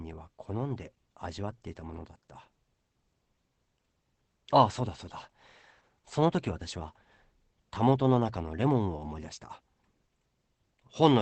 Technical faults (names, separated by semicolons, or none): Opus voice compression